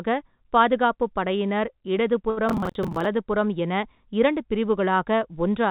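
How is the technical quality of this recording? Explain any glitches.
The speech has two glitches close together, both on a call path. That path limits the band to 4 kHz and adds its usual coding noise, which fits G.711-style telephone coding.

Short stall from a late packet, 2.30 to 2.39 s. A packet arrived late, so the last sound was stretched for 68 ms. Nothing is lost, but it drags slightly.

Processor overload crackle, 2.49 to 3.05 s. The processor missed about twenty deadlines for buffers of roughly 10 ms, replaying old audio each time. This produces gritty, hard-edged crackle.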